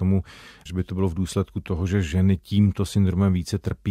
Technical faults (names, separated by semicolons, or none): none